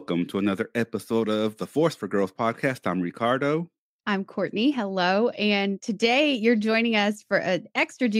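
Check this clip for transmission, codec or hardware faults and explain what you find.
No transmission, codec or hardware faults.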